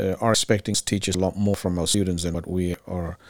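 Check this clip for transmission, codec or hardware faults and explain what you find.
The clip has one kind of fault, audio missing between chunks, heard seven times at 0.34, 0.74, 1.14, 1.54, 1.94, 2.34 and 2.74 s. The 1.54 s skip falls just before "from our", and the 1.94 and 2.34 s skips just after it. Each is a sudden jump where roughly a tenth of a second vanishes with no silence, the sides spliced directly. Processing in half-second blocks is the likely cause, losing a piece at each handover. Unlike a dropout, no gap opens, and the steady 0.4 s spacing sets it apart from random packet loss.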